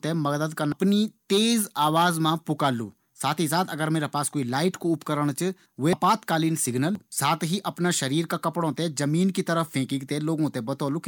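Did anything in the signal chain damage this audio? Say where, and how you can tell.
Yes, at the codec or storage stage: compressed frames are skipped at 0.72 s, 5.93 s and 6.95 s, just before "साथ ही अपना". The speech jumps ahead by roughly 0.7 s, 0.5 s and 0.7 s. Each jump fits missing or rejected frames of about 85 ms.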